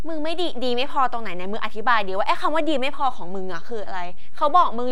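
A DC offset runs through the whole speech clip. The waveform sits shifted from zero, about -18 dBFS. It is inaudible itself, but wastes headroom and adds steady energy at the lowest frequencies.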